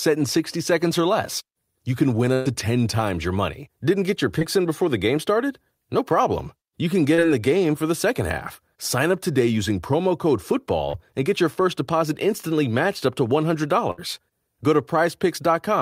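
Packets were lost or arrived too late in this speech recording, in two sizes. Two bursts of packet loss cut out longer stretches. At 2.33 to 2.47 s, just after "can win", about 120 ms of audio never arrived. At 13.91 to 13.99 s, about 60 ms went missing. Each time the receiver stretched the last sound to fill the gap, about 120 ms and 70 ms, and faded it down, so a held buzz or fading hiss stands in for the lost part. The speech then resumes with that section gone. Short concealed packet loss also strikes three times with smaller gaps. At 4.39 to 4.43 s, between "get your" and "in before", about 20 ms is missing. At 7.15 to 7.20 s, about 40 ms is missing. At 10.90 to 10.99 s, after "today using promo code" and before "and get your first", about 40 ms is missing. In each, the decoder extrapolated the previous sound and blended back into real audio, leaving a brief smear or wobble where a short sound may drop out. 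At 10.90 s the patch also adds a little extra time.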